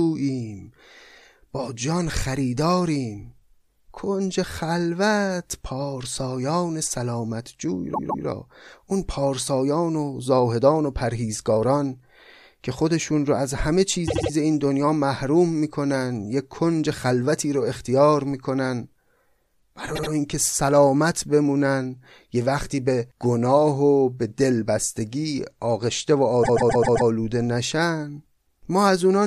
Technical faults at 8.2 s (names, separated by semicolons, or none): repeated frames